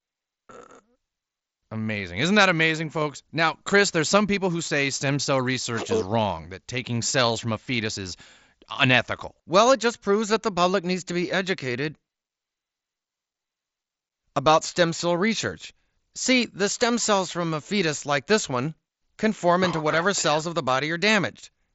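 Nothing is technically wrong with this speech recording: it comes over a Bluetooth mSBC headset link, and nothing here needs fixing.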